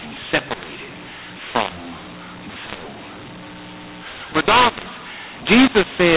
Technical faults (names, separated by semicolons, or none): mu-law and A-law mixed up